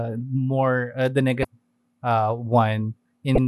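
A speech clip with two brief glitches, at 1.41 to 1.45 s just after "more uh the" and at 3.35 to 3.38 s. Each is damaged data in a compressed stream: corrupted bytes make the decoder misread frames and lose sync until it finds the next header.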